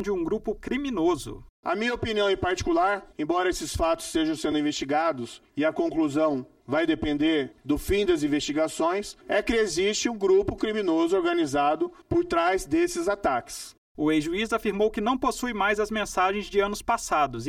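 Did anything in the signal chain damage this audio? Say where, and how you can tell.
Yes. Channel delay (comb filtering) runs through the whole clip. One channel arrives around 3 ms late before the mono sum, so shared content cancels at evenly spaced notches, the first near 150 Hz. The sound is hollow and phasey, pointing to a driver or buffer offset.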